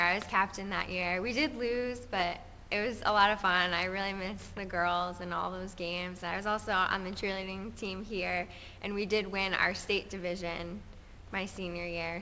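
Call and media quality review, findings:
No faults found: the signal arrives through the call path intact, band-limited to nothing above 8 kHz with the usual coding texture expected of a wideband G.722 call codec running at what sounds like 64 kbps.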